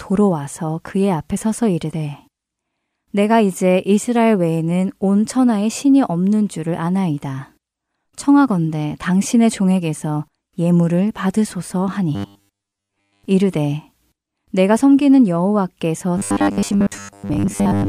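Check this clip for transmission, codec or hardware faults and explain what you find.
Audio delivery to the playback software was starved twice, most likely causing robotic sound from repeated short buffers, from 12.15 to 13.25 s and from 16.18 s to the end at 17.88 s. With fresh samples missing, the last 10 ms chunk was replayed over and over in place of most of the real signal, which fits a 10 ms buffer. That loop imposes a steady 100 Hz buzz, so the speech turns hard and metallic while only loosely tracking its original shape.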